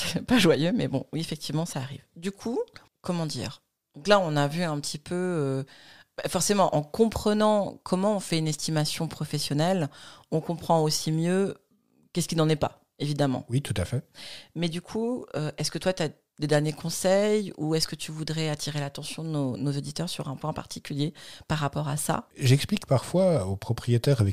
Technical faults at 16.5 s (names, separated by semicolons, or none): none